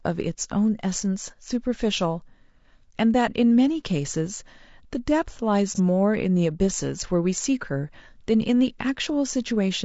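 From the start the speech has a rough, grainy texture, with noise filling the gaps between harmonics and a thin, synthetic-sounding top band, plainly audible throughout. That points to low-delay AAC compression, likely AAC-ELD at about 32 kbps. Its short frames resolve the voice's pitch structure poorly, so at this rate the damage is a constant graininess rather than the swirling, watery artefacts of a long-frame codec.

At 5.75 s, lasting to 5.80 s, comes a brief smeared, noisy patch where the sound loses definition for a moment. This is AAC frame loss with concealment. A stretch of about 30 ms, consistent with a single lost frame, was filled in by the decoder from the preceding good spectrum. Because the gap is so short it never fades toward silence, and the patch is smeared rather than a hard click or dropout.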